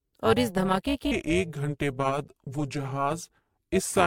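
Speech clip with a metallic buzz running right through it: that's overlap-add ripple, where frames were rejoined with an overlap that doesn't sum to flat gain, so the level pumps by about 11 dB at a rate somewhere around 300 Hz, giving extra tones around each note. The whole thing also sounds swirly, hollow and smeared, with soft attacks. That's more damage than a single 128 kbit/s MP3 pass would explain, so the likely cause is generation loss from re-encoding it something like ten times. Then from 1.12 s, right after "اور اس دھماکے کے", to the end, there's a section at the wrong speed: it drags at 0.818 times normal, sounding slower and deeper, roughly four semitones down, which is likely playback fitted to the wrong clock.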